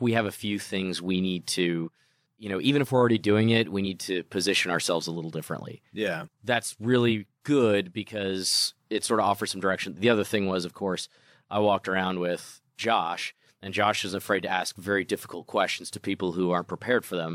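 Compressed frames skipped at 1.84, 3.83, 7.08 and 14.47 s in this speech clip: at each point the speech jumps ahead by what sounds like a single compressed frame, about 50 ms of audio. The frames are either missing from the file or were rejected by the decoder as damaged. The frame length is 46.4 ms.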